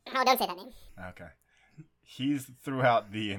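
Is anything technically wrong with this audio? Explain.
Yes. From 0.0 to 0.89 s, a section at the wrong speed plays about 1.69 times too fast. It was likely clocked wrongly, so the speech rushes and jumps roughly ten semitones higher.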